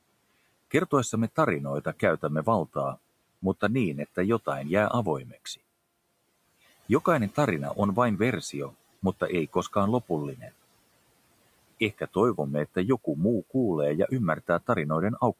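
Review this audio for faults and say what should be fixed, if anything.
Between 5.25 and 5.58 s the speech goes faint and swallowed, dipping by about 17 dB at its deepest for roughly 150 ms in total. This is speech cut by the noise suppressor, which mistook quiet speech for background. Easing the suppressor's strength would prevent it.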